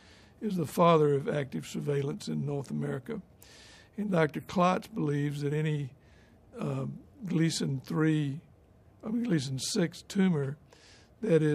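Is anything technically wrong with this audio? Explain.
No, nothing technically wrong can be heard in this audio. There is no audible problem here that would need explaining.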